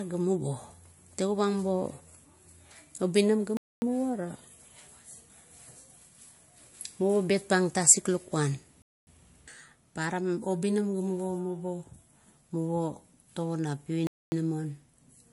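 Across the whole recording the speech has plainly audible coding damage: nothing reaches above 11.3 kHz, sibilants come out dull and metallic, and weaker detail swirls in and out with a watery texture. This is likely MP3 compression at a low bitrate, consistent with roughly 48 kbps. With so few bits, the encoder removes the top band outright and drops quiet spectral components frame by frame, which produces the unstable, smeared character.

Three silent holes interrupt the audio at 3.57 to 3.82 s, at 8.82 to 9.07 s just after "bet pang tasik lukuan", and at 14.07 to 14.32 s just after "tago na". Each lasts 250 ms and they recur every 5.25 s, the signature of a gap between chunks. The audio was handled in 5-second blocks, and silence was inserted at each join. Nothing is missing; the flow simply stops abruptly and resumes.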